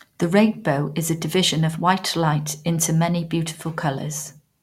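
No technical faults can be heard anywhere in the recording. There is nothing at any point that needs explaining.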